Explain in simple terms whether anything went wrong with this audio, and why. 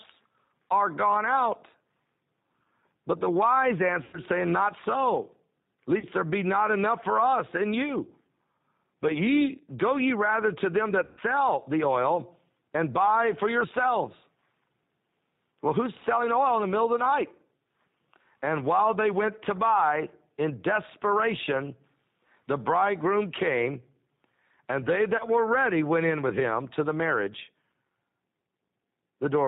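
Throughout, the speech sounds slightly rough, thin and synthetic, with nothing bright or crisp at the top. That is the G.729 codec, a phone-call compression scheme that rebuilds the voice from a rough model of the throat and discards everything above 4 kHz.

At 4.04–4.18, 5.99–6.05, 11.05–11.21 and 25.17–25.24 seconds the sound briefly smears into a buzzy tone or a coloured noise that fades, then stays weak or distorted for a moment. That is VoIP packet loss concealed by the speech codec. Pieces of the call went missing and the decoder guessed at the gap by stretching what it last heard.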